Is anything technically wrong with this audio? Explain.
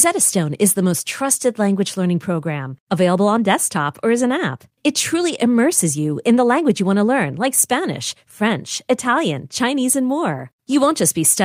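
No, the speech signal comes through intact, with nothing in it that points to a technical fault.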